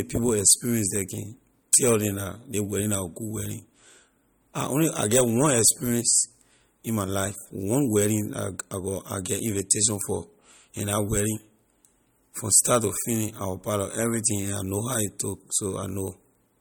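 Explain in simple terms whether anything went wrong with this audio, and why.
Throughout the speech, from start to finish, there is a plainly audible watery, swirly quality, and nothing is heard above about 18.7 kHz. That points to likely MP3 compression at a low bitrate. Unlike a simple treble filter, which only dulls the sound, this also makes faint detail flicker in and out.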